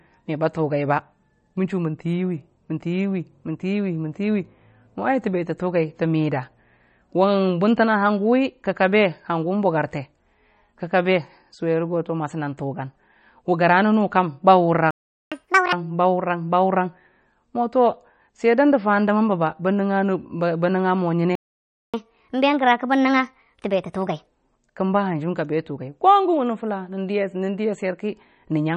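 Speech runs throughout, and it carries plainly audible damage that is likely MP3 compression. The sound is watery and swirly. S sounds carry metallic chirps, and onsets smear. That degree of damage points to a low bitrate, around 33 kbps. At that rate the encoder starves weak frequency lines, and they flicker in and out between frames. At 14.91 s the audio drops to silence for 0.41 s, until 15.32 s. This is a playback stall, likely from the player running out of data. It happens again at 21.35 s, this time for 0.58 s, until 21.94 s. Both times the sound halts mid-flow, then resumes where it stopped. Each stall is followed by catch-up at higher speed. From 15.32 s to 15.73 s the sound plays at double speed. Pitch jumps by roughly ten semitones, giving a chipmunk quality. From 21.94 s to 24.27 s it runs at 1.25 times speed, with pitch raised by about four semitones. The player is resampling its backlog to win back the lost time. 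Speed and pitch then fall back to normal.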